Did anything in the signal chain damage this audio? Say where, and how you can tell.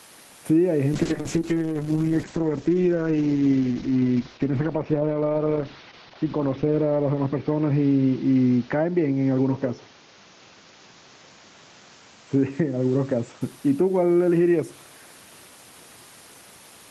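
Yes. Throughout the clip there is gain pumping: the room's background noise sits well below the speech, and the gain swings by around 10 dB, pulled down under every loud syllable, so loud and soft parts end up squashed closer in level. This likely comes from input gain set too high, with a fast limiter in call processing clamping each peak.

From 0.95 s to 13.47 s there is a call bitrate drop at the codec and network stage. The encoder falls from 32 kbps to 8 kbps, with a 4.8 s stretch at the lowest rate. Bandwidth narrows from 20 kHz to 8 kHz, so the speech turns muffled and rough until the rate recovers.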